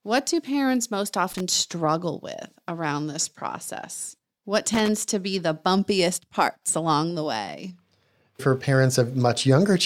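Loose connector crackle at 1.30–1.41 s, after "do parents most", and 4.74–4.88 s, before "to be the bumpiest": a worn contact chops the speech into brief, irregular scratchy bursts.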